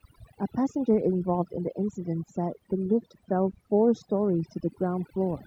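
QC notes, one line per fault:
Throughout: overdone noise removal. The denoiser was set too strong, so bands near its noise estimate are cut, leaving twinkling silence and quiet parts of the voice cut away with them.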